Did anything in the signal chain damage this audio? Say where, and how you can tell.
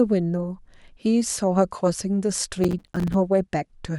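Yes. From 2.64 to 3.14 s the speech breaks into gritty crackle: processor overload crackle at the driver or buffer stage. About 20 tiny silent gaps, each around 5 ms, repeat rapidly, fitting missed buffer deadlines. Unlike clipping, the crackle ignores loudness and stops abruptly.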